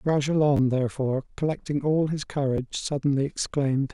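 At 0.57 to 0.59 s and at 2.57 s, a repeated buffer: new audio arrived late, so an 11 ms block, which fits a 512-sample buffer, replays twice, then once, producing brief buzzy stutters.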